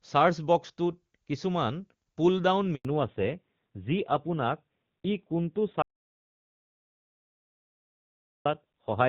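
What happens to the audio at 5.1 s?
At 5.1 s the call is in a fallback to narrowband, from 2.85 s to the end. The codec has likely switched from HD Voice to a low-rate narrowband mode, so the sound is dull and rough with nothing above 4 kHz. Unlike a plain low-pass filter, the switch is abrupt and adds a coarse coded texture rather than just muffling.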